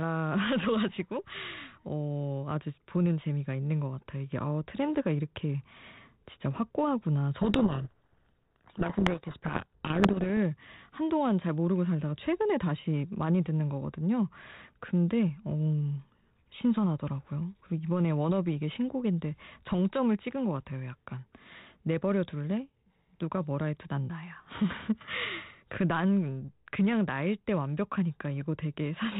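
From 7.4 to 10.3 s the speech is buried under harsh, grinding distortion. This is a codec payload misread. The G.726 decoder is unpacking each code word with its bits in the wrong order. Every sample's difference value comes out wrong, so the adaptive prediction goes astray and the output turns to rough noise. It clears at 10.3 s, when both ends agree on the packing again. Around it, the 32 kbit/s G.726 path carries light codec grain.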